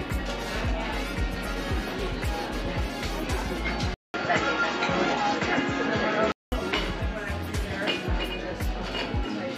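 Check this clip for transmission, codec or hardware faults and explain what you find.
One hardware fault turns up. From 3.94 to 6.52 s, an input switched to a poorer device is the likely cause: a 200 ms silence, then boxy sound cut off above 7.6 kHz, with a roughly 5 dB level shift and a faint new hiss. A simple bandwidth drop wouldn't change the level and noise floor as well.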